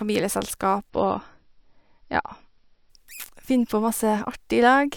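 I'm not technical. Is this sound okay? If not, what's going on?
No. From 0.90 to 2.90 s the speech comes through an adaptive stream at a lower bitrate: the connection slowed, so the player briefly switched to a cheaper, lower-quality version of the audio. In those two seconds everything above 5.8 kHz vanishes, making the speech duller and grainy. Unlike a dropout, there's no silence or gap, and unlike a permanently muffled recording, the crisp sound returns abruptly once the stream switches back.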